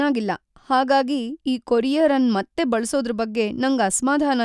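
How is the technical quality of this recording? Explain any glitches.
No technical faults are audible anywhere in the speech recording.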